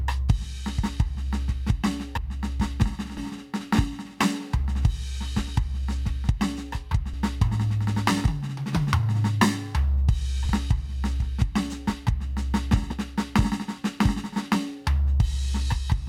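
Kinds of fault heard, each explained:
Compressed frames skipped: whole chunks of the encoded music go missing, so playback jumps ahead, from a few tens of milliseconds to most of a second.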